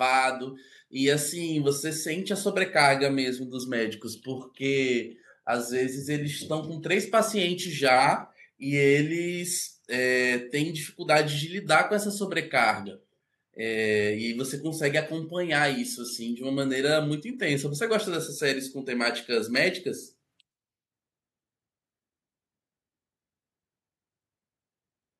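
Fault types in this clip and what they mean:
No faults detected; the signal path is intact throughout.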